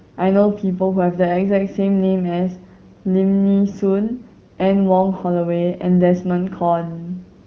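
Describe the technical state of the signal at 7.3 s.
At 7.3 s the speech is intact, with no fault at that moment, only the band-limited sound of the AMR wideband (HD Voice) codec at a rate that fits 12.65 kbit/s, with nothing above about 6.8 kHz.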